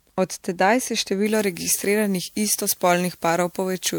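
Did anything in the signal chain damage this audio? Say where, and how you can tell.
Yes. Generation loss runs through the whole clip and points to the codec stage. The speech has a swirly, smeared, hollow quality and blurred attacks, more than a single 128 kbit/s MP3 pass would explain. It most likely comes from roughly four successive decode and re-encode cycles, each quantising on a shifted frame grid.

Pre-emphasis left on starts at 1.26 s, right after "tedaj se", and lasts to the end. The speech turns thin, bright and sibilant, with about 13 dB too much at 10 kHz relative to 1 kHz. The boost matches a 75 µs FM pre-emphasis curve whose de-emphasis was never applied at playback.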